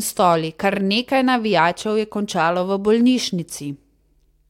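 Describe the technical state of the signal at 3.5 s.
At 3.5 s the speech signal is intact, with no audible technical fault.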